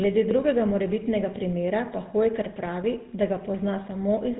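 Throughout, the speech carries GSM full-rate codec damage. Nothing passes above 3.8 kHz, and coarse pulse excitation adds buzzy roughness, fitting its 13 kbps rate.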